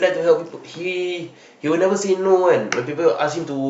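No technical faults can be heard anywhere in the speech. It has passed through a WebRTC call path, and its high frequencies stop at about 8 kHz, which points to the Opus codec working normally with that cut-off.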